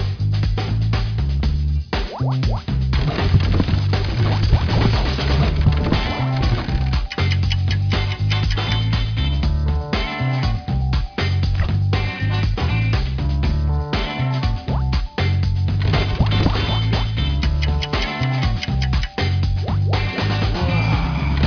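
No technical faults are audible anywhere in the recording.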